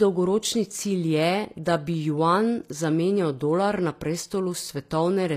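From start to finish the speech carries plainly audible codec damage, with treble that stops at about 14.9 kHz and does not line up with the harmonics below it. This is likely HE-AAC compression at a low bitrate near 24 kbps, rebuilding the upper band from copied lower bands.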